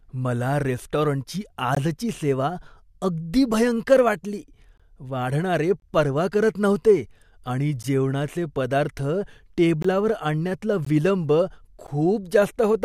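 Gaps between stream segments cut the speech at 1.75–1.77, 4.78–4.80 (after "भयंकर वाटली"), 5.80–5.82, 7.83, 9.82–9.85, 10.85 and 11.87 s. Segment timestamps leave holes, filled with silence. Each is a hard-edged dropout of 12–23 ms, recurring on one-second boundaries.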